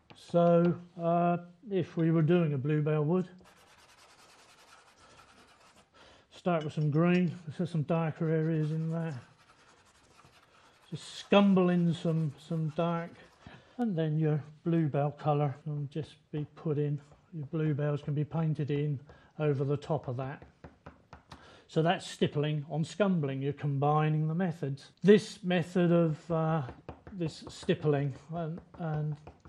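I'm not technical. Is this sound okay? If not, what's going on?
No. MP2 compression damage runs through the whole clip, start to finish. The sound is dull, with a gurgling, grainy roughness. This is likely from MPEG Layer II encoding that had too little data to work with. That format splits the sound into many narrow slices by pitch and shares out a limited budget among them. Here the budget ran short, so the brightest slices keep switching off and on and the rest are stored crudely.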